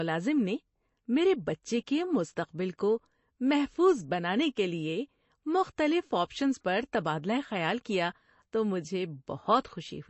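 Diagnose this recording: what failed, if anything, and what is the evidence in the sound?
Throughout, the speech sounds watery and swirly with nothing above 8 kHz. This is likely MP3 compression at the codec stage, consistent with a 32 kbps bitrate.

From 9.60 to 9.65 s, a short hiss precedes an attack, which sounds smeared. This is pre-echo: codec quantisation noise is spread about 42 ms ahead of the transient.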